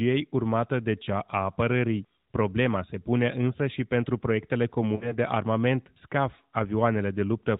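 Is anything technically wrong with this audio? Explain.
Yes. Between 4.96 and 5.14 s there are lost AMR speech frames. Radio errors corrupted about 40 ms of the stream, which fits two failed frames. The narrowband decoder concealed the gap by repeating its last good pitch and vocal tract settings at falling gain, so the sound briefly smears and dips, then returns rough for a moment.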